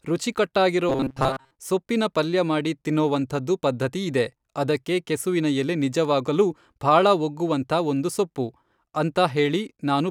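It's a speech clip, and from 0.89 to 1.51 s it turns into robotic sound from repeated short buffers: a rigid, metallic buzz near 133 Hz, likely from about 7.5 ms chunks looping over most of that stretch, just before "ಸೊಪ್ಪಿನ ಪಲ್ಯ ಮಾಡಿ ತಿನ್ನೋವಂಥದ್ದು".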